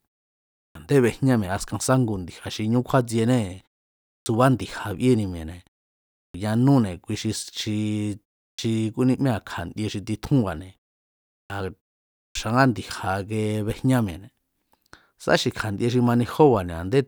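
At 0.65, 4.17, 6.24, 8.49, 11.41 and 12.25 s, a clipped start after a pause swallows about 90 to 100 ms while the idle output wakes. "a̱ndé bejñá" and later onsets begin abruptly, appearing on a waveform as hard-edged starts with no build-up.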